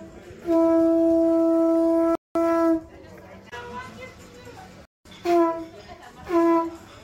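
At 2.15 s and again at 4.85 s, a gap between chunks cuts in: 200 ms of silence between 2.5 s chunks, with the sound resuming intact rather than skipping ahead as in a dropout.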